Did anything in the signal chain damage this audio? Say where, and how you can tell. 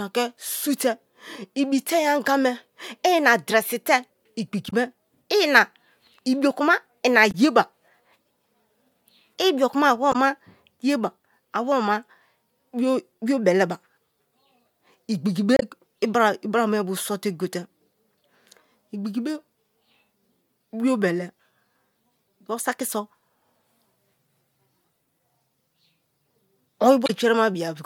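Yes, at the codec or storage stage: the speech has damaged data in its compressed stream. Brief glitches break through at 4.69–4.73 s, 7.31–7.35 s, 10.12–10.16 s, 15.57–15.63 s and 27.06–27.10 s, each only 38 to 64 ms long. Corrupted bytes make the decoder misread those frames, lose sync and hunt for the next valid frame header, producing these isolated glitches rather than steady noise.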